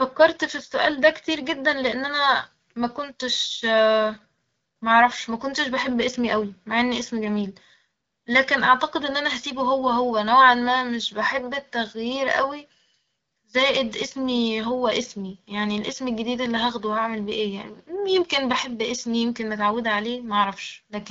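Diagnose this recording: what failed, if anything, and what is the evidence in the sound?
Nothing failed: the speech runs through an AMR wideband (HD Voice) codec path whose clarity fits a 12.65 kbit/s rate, with the top of the band stopping near 6.9 kHz as that codec's bandwidth sets it, and no stage from capture to playback shows a fault.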